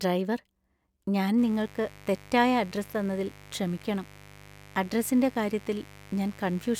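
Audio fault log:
1.38–6.79 s, mains buzz: steady, raspy buzz about 25 dB below the speech. Spikes twice per 50 Hz cycle spread harmonics into the kilohertz range.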